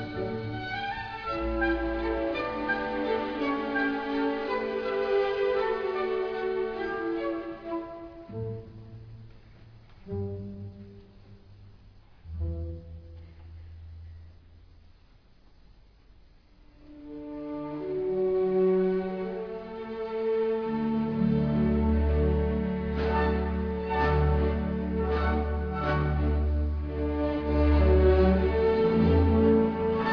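No technical faults can be heard anywhere in the recording, and the signal holds steady throughout.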